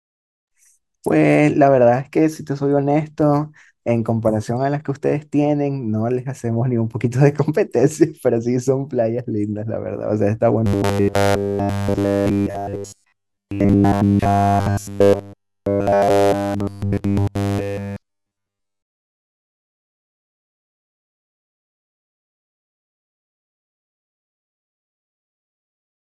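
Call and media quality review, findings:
Robotic sound from repeated short buffers, 10.66 s to 26.12 s, running to the end of the clip. Speech collapses into a rigid metallic buzz pitched at 100 Hz. The words are only roughly traceable. Likely cause: the playout or jitter buffer starving. Fresh audio arrives too rarely, so the last chunk is replayed to fill the gap. A 100 Hz buzz fits a 10 ms chunk looping. Essentially all of the real audio in that stretch is skipped.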